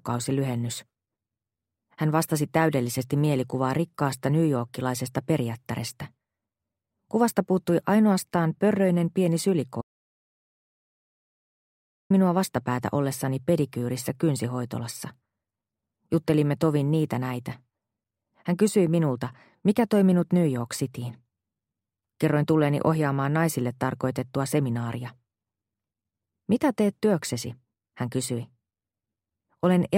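The audio has an audio dropout to silence from 9.81 s to 12.10 s. The sound cuts off mid-flow, and about 2.3 s is missing, with no room tone in the gap. On a waveform this shows as a flat line. On a spectrogram it is a fully blank vertical band with hard edges on both sides. The likely cause is a brief loss of the input signal, such as a disconnect, a link failure or a stray mute, while recording carried on writing digital silence.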